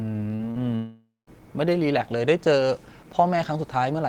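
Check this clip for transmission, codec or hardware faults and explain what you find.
The clip has two kinds of transmission fault in the speech, both near the start.

Short concealed packet loss at 0.35–0.41 s and 0.51–0.57 s: about 40 ms of audio went missing each time, and the receiver bridged each gap by extending the preceding sound before blending back. Each is heard as a brief smear or wobble.

Long network dropout from 0.75 to 1.29 s: about half a second of audio is gone, likely because nothing arrived over the network. The last sound is stretched into a fading buzz or hiss, and the final 0.18 s is near-silence before the speech resumes, with the lost portion skipped.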